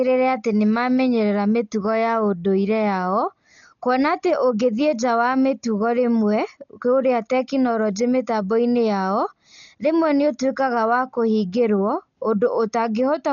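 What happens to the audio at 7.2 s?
At 7.2 s you're hearing the same damage that runs through the whole speech clip: the band stops dead at 7.1 kHz, and everything sounds dull, with a rough, fluttering noise around tones. That's most likely Dolby Digital compression at a starved rate, something like 40 kbps, where empty frequency lines get filled with dither noise.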